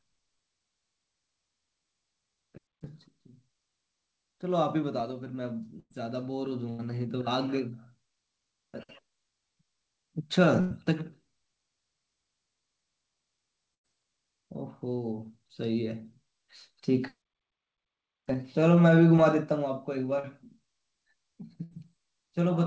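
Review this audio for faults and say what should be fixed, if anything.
Five times in this speech, the sound locks into a brief held buzz or fading hiss and then jumps ahead: 5.80 to 5.92 s, 6.70 to 6.81 s, 10.61 to 10.72 s, 13.74 to 13.86 s and 21.63 to 21.73 s. At 5.80 s the held sound also drops into about 40 ms of silence before the speech returns. This is a burst of packet loss. Roughly 80 to 100 ms of audio never arrived in time, and the receiver stretched the last sound and faded it to cover the gap, so that stretch of speech is lost. A larger jitter buffer, or forward error correction and redundancy on the network path, would prevent it.

At 19.16 s and again from 20.19 to 20.25 s there is a much shorter smear or wobble, with a momentary blur of detail. This is short concealed packet loss. Packets covering about 20 ms and about 40 ms were late or lost. The decoder bridged each hole by extending the preceding sound, for roughly 14 ms and 42 ms, before blending back into real audio. 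Adding in-band error correction and adapting the jitter buffer to network conditions would reduce these glitches.

The call path's band limit at 8 kHz is audible as an absence of high-frequency content, which fits a G.722 connection.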